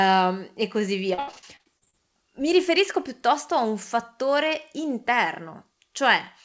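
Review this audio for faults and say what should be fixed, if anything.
Between 1.14 and 1.95 s the speech breaks up into that choppy, robotic texture you get from repeated packet loss. There's a quick run of about ten holes, the longest around 76 ms. Each one gets papered over by stretching the previous sound, and roughly 41% of that stretch ends up as patched filler, so bits go missing. The G.722 path itself is fine, just band-limited to 8 kHz. To avoid this, fix the network loss or jitter upstream, or enable FEC and give the jitter buffer more headroom.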